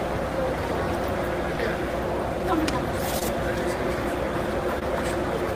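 At 3.19 to 3.23 s and again at 4.79 to 4.83 s, a short concealed packet loss occurs: about 20 ms of audio failed to arrive in time for the decoder, which fits a single lost packet each time. The receiver covered each hole by extrapolating the preceding sound for roughly 17 and 19 ms, then crossfaded back into the real signal, leaving a brief smeared, wobbly patch where the original detail is missing.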